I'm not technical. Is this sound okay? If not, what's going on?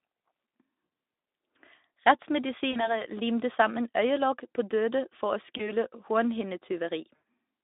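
No. The clip has VoIP packet loss concealed by the speech codec: bits of the call went missing, and the phone software filled each gap by smearing the last sound into a fading buzz. This happens at 0.85 to 0.89 s, 2.71 to 3.03 s just before "limte sammen øyelokk på", 5.57 to 5.71 s right after "på døde for å", and 7.15 to 7.25 s.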